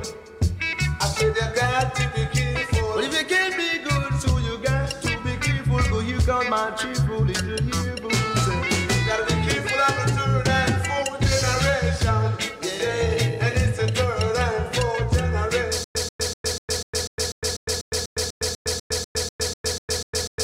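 From 15.84 s to the end, a stutter with silent gaps: one 137 ms fragment repeats 18 times every 246 ms, each followed by 109 ms of digital silence, likely a stalled player retrying. Waveform and spectrogram show identical blocks split by flat, empty gaps.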